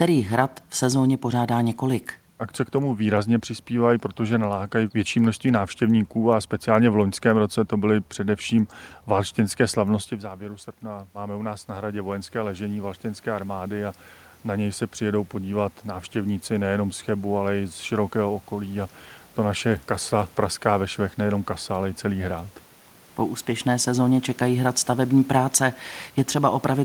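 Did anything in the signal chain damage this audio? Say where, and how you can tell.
Yes. Automatic gain rising, in call processing, from 10.2 to 19.0 s, between "především valštinské slavnosti v" and "to naše kasa praská". The talker moved back near 10 s, dropping the level by about 14 dB. The gain control then slowly added about 11 dB, so voice and room noise swell together.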